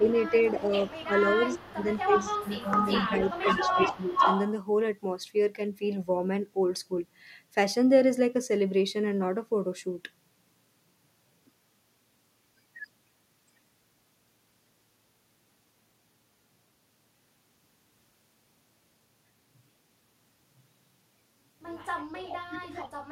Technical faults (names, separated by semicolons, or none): speech suppressed in double talk; echo leak